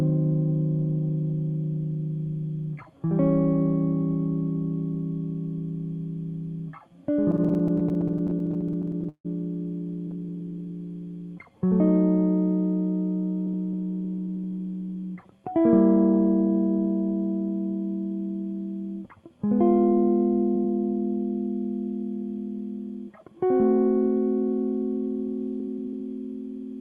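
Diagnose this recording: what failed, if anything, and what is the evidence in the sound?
Repeated stalls (stutter) hit the network and jitter-buffer stage between 7.31 and 9.27 s. The music halts and restarts about 30 times. Each gap is bridged by continuing the last sound, which adds up to 451 ms of filled audio. The longest hold is 158 ms, and it fades. Nothing is lost, yet concealment covers 23% of that span. Packets arrived late or too slowly, so the buffer kept running dry.

A jitter buffer slow-down follows from 10.07 to 10.71 s. The passage plays at 87% speed with unchanged pitch. It is stretched by 92 ms, so the sound drags and notes linger. The buffer was running low or had just raised its target delay. To rebuild a reserve, the receiver repeated single pitch periods several times in a row. This happens in the buffer's time-scaling, not in the codec.

A jitter buffer speed-up occurs from 13.46 to 15.39 s. 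The music runs at 107% speed, again at the same pitch. It sounds hurried, and the tempo no longer holds steady. About 150 ms is removed in short slices of one or a few pitch periods. The buffer held more audio than it aims for. The receiver trimmed audio to cut latency, and the Opus path's 12 kHz top end stays intact through it.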